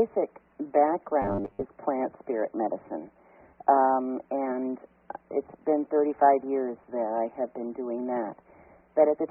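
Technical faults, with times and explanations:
1.22–1.63 s, robotic sound from repeated short buffers: the sound collapses into a rigid, metallic buzz fixed at 100 Hz. The likely cause is a stretch of about 10 ms being replayed over and over while new audio arrives too late, so most of the real signal is skipped.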